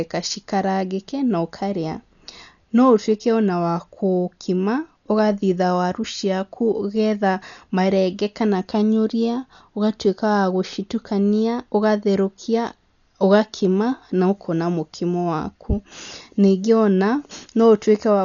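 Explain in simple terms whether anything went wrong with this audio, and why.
The speech sounds dull all the way through, with nothing above about 6.9 kHz and a rough, fluttering hiss clinging to voiced sounds, likely heavy Dolby Digital compression rather than simple muffling.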